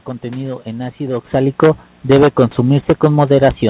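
Automatic gain falling from 1.33 s, after "contenido en ácido": the gain control judged the input too loud or its background noise too strong and kept lowering it, sinking speech and background together.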